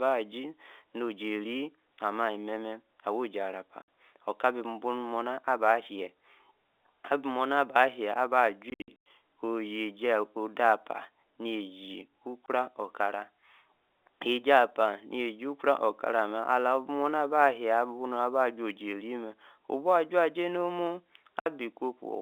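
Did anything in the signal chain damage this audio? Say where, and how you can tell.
Yes. At the converter, sample clock jitter adds a faint hiss and roughness, around 40 dB below the signal. It swells on loud, bright sounds and disappears in pauses. Timing errors of a couple of microseconds turn steep waveform slopes into noise.

On the network, packet loss filled with silence cuts hard-edged holes at 3.82 to 3.87 s, 12.46 to 12.48 s, and 21.40 to 21.46 s after "nor mumu". From 8.70 to 9.06 s, 240 ms drops out in scattered bursts, the longest 100 ms. The 20 ms multiples fit 20 ms packets, under the narrow G.711 telephone band.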